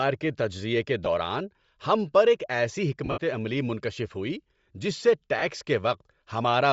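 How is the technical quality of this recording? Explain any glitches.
The recording has plainly audible coding damage throughout and three short dropouts.

Throughout, the speech has a breathy, grainy edge and a dulled, noisy top end. That pattern is likely Bluetooth LC3 compression, and it fits a rate around 32 kbps with 10 ms frames. At that rate the transform codec zeroes much of the upper spectrum and fills it with shaped noise, so sibilants and high harmonics lose their detail and take on a hissy texture.

The lost LE Audio frames occur at 1.05 s, at 3.05 to 3.18 s, and at 5.39 to 5.42 s. When a frame is missing, the LC3 decoder conceals it by reusing the previous spectrum with randomised signs, so the speech briefly turns into a noisy smear instead of going silent.

At 1.05 s the gap is a single 10 ms frame, heard as a quick blur. At 5.39 s about 30 ms is lost, which fits three consecutive frames, and it gives a short, rough smear. 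The 3.05 s event is the longest. There, 100 ms of losses are scattered over 120 ms, with the longest run around 70 ms. Across that run the repeated spectrum fades, so the sound thins and dims before normal decoding returns.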